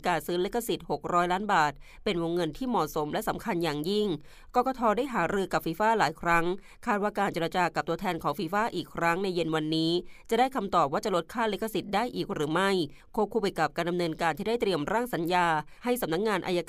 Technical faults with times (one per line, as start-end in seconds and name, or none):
none